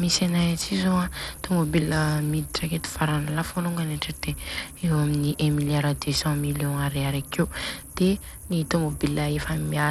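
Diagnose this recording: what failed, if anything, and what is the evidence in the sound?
The failure sits at the codec stage, and it lasts the whole clip. The speech has plainly audible coding damage from start to finish. The top end thins out and flickers. A gritty grain rides on the voice, with some aliased harshness. This is likely Bluetooth SBC compression. SBC splits the signal into a few wide sub-bands and hands out bits without a hearing model. At a low rate, which fits roughly 96 kbps, the upper bands are starved and the rest are coarsely quantised.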